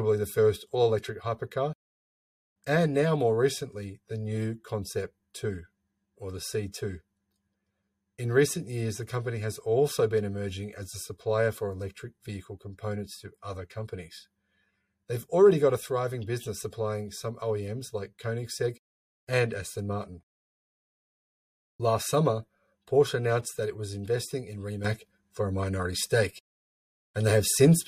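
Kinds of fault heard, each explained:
Sudden gain jump: At 24.85 s the level steps up by about 7 dB from one sample to the next and stays there until the end at 27.87 s. There's no fade or ramp; the sound and the background noise under it both get louder at exactly the same instant. That points to a digital gain change, likely a level setting or bit shift applied in one go rather than smoothed in over a few milliseconds.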